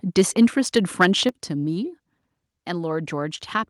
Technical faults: microphone overload; microphone volume stepped down

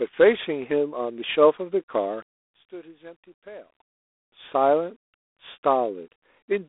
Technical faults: G.726 ADPCM; one channel inverted

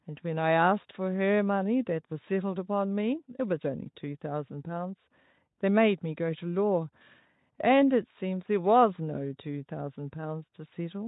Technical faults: none

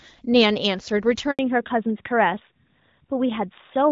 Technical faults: handover gap; fallback to narrowband

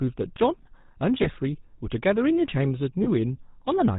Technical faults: GSM full-rate codec; lost GSM frames

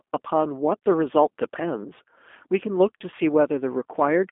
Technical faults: G.729 codec

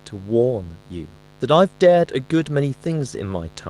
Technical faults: mains buzz

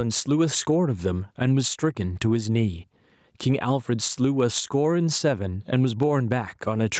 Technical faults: gain pumping

